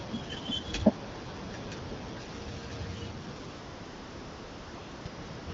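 From 3.49 to 5.05 s, and again from 5.07 to 5.47 s, the sender judged the talker silent and stopped transmitting speech frames, so the receiver substituted AMR comfort noise generated from a rough sketch of the background's level and spectrum. The real background drops away for 1.6 s and then 0.4 s, replaced by an even, smooth hiss that briefly switches out near 5.06 s and back in. The wideband coding, lightly marked and consistent with 12.65 kbit/s, stays clear.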